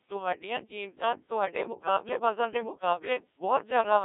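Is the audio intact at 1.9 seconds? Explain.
No. At 1.9 seconds, as across the whole clip, the speech carries heavy Codec 2 vocoder damage, consistent with a very low rate of around 1.3 kbit/s. Only pitch, voicing, energy and spectral envelope survive, so the resynthesised voice sounds robotic and buzzy within a roughly 300 Hz to 3.6 kHz band.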